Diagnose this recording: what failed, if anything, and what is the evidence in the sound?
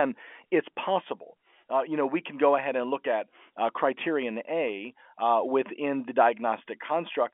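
Nothing failed: the speech occupies the usual telephone band of about 250 Hz to 3.4 kHz, consistent with A-law G.711 telephone coding working as intended, and no stage in the chain shows a fault.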